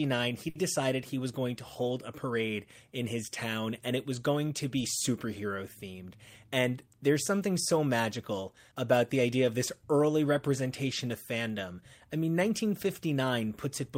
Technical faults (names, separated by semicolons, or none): short stall from a late packet; jitter buffer speed-up